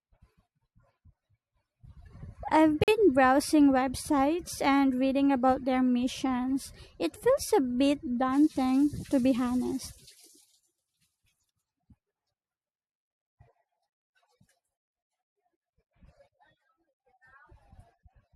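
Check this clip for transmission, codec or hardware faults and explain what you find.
One transmission fault is present in this speech clip. At 2.84 to 2.88 s, a gap between stream segments drops in about 44 ms of hard-edged silence where mismatched segment timestamps leave a hole; no audio is lost.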